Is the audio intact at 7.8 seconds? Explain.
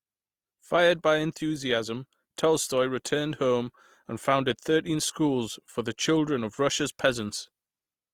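No, at 7.8 s the speech carries Opus compression damage, present throughout: grainy, rough tones, likely from band-filled CELT coding near 24 kbps, which shows as noisy, smeared harmonics on a spectrogram.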